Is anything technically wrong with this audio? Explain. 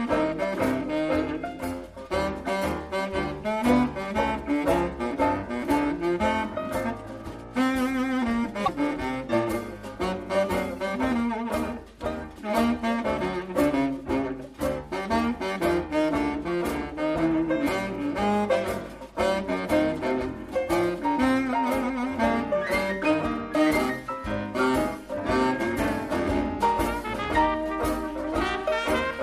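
Yes. From 8.64 to 8.69 s, a stretch of about 54 ms, the audio is broken by a brief burst of damaged data in a compressed stream, heard as a short disruption that doesn't belong to the sound around it. Part of the encoded data at that point was corrupted, so the decoder couldn't read those frames properly, lost its place in the stream and had to search for the next valid frame header before normal playback resumed.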